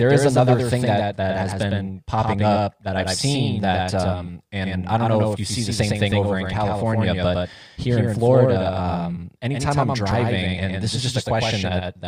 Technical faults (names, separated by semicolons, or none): doubled audio track; overlap between stream segments